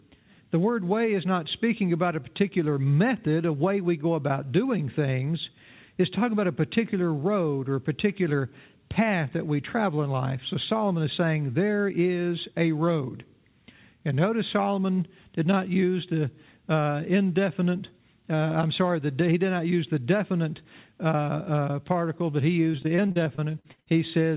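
From 22.72 to 23.88 s, repeated packet loss leaves a dozen or so gaps up to 61 ms, each patched by extending earlier audio, sounding choppy and robotic.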